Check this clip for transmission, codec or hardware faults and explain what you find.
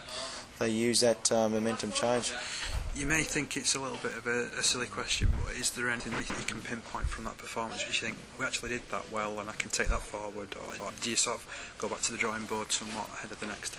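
Chunks out of order at 6.0–6.3 s and 10.7–10.9 s. A 100 ms chunk plays two, then one, chunk late. The audio jumbles briefly.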